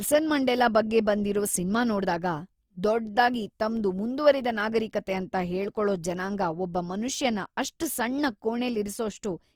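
From start to finish the speech carries plainly audible Opus compression damage, likely from encoding in the codec's CELT music mode at a low rate; the grain fits roughly 24 kbps. The band energies are held, but with too few bits the fine structure inside each band is rebuilt from folded lower-band content or noise. Voiced sounds therefore come across rough, grainy and noisy, while the bandwidth stays full, reaching up to about 20.2 kHz.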